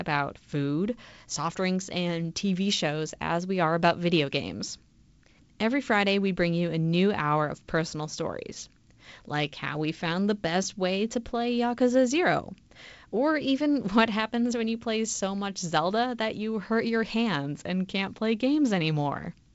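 Nothing stood out on listening to this speech, which comes through G.722 wideband telephone coding at what sounds like 56 kbit/s, with the expected light coding hiss and nothing above about 7.7 kHz.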